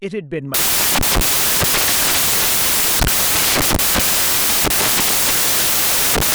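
Speech that collapses at 0.54 s into loud, harsh broadband noise lasting to the end, the classic sound of samples built from the wrong bytes: the decoder assembles each sample misaligned or byte-swapped, so the rapidly changing low-order bits dominate.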